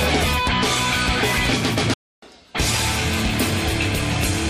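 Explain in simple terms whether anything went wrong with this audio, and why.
At 1.94 s the sound cuts out mid-flow and stays silent until 2.22 s, a gap of about 0.28 s. This is a playback stall: the player likely ran out of incoming data or was briefly held up, so nothing reached the output.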